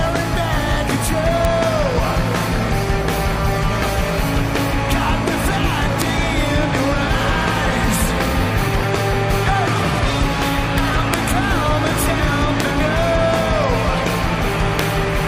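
Integer overflow cracks at 1.45, 6.02, 10.78, 11.14, 12.6 and 14.79 s: peaks barely past full scale wrap to the opposite sign, showing as sharp vertical spikes and broadband spectrogram streaks.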